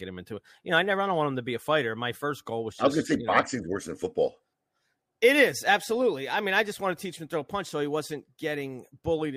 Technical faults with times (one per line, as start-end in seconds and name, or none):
none